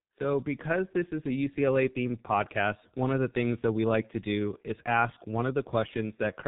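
From start to finish the speech sounds muffled and hoarse, with smeared consonants and nothing above 3.8 kHz. This is heavy G.723.1 codec damage: its coarse 30 ms frames and slowly updated voice model fit a bitrate around 6 kbit/s.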